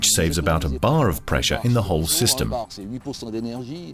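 No faults can be heard anywhere in the audio.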